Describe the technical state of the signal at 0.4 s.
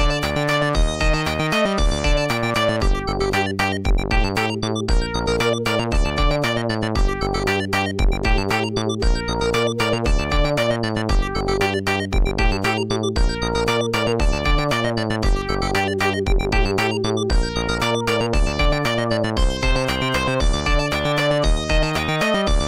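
At 0.4 s the audio is intact, with no technical fault audible at that moment.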